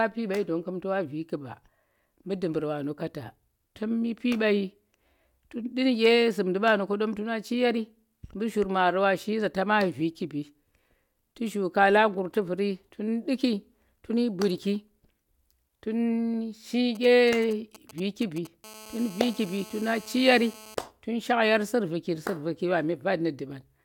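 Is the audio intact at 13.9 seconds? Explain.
Yes, the audio is intact at 13.9 seconds, with no dropout, click, distortion or other fault to be heard there.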